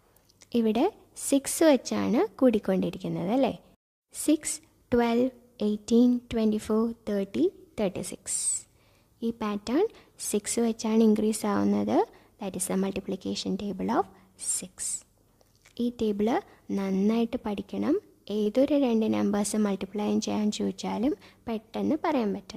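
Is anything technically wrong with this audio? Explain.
Yes, there are two spots of short concealed packet loss, at 18.43–18.47 s and again at 21.09–21.13 s. Each time about 20 ms of audio never reached the decoder in time, so the receiver patched the gap by extending the sound that came just before it, roughly 20 ms of fill the first time and 17 ms the second, then cross-faded back into the real signal. You hear each one as a quick smear or wobble in the sound.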